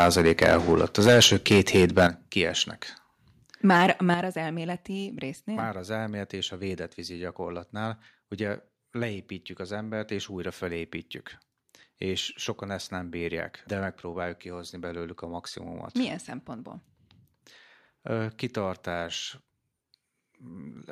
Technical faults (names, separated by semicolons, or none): microphone overload; microphone volume stepped down